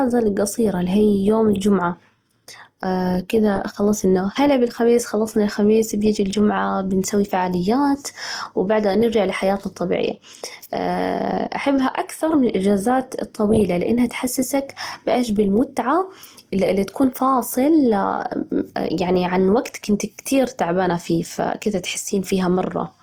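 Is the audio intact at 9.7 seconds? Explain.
No, not cleanly. At 9.7 seconds you're hearing Opus compression, and it runs through the whole clip, not just that moment. The speech has a noisy, rough, grainy texture, which is likely the encoder's CELT mode starved for bits, in keeping with a low rate around 24 kbps. It keeps each band's energy but fills the detail with folded copies of lower bands or noise. The top end still reaches about 20.2 kHz.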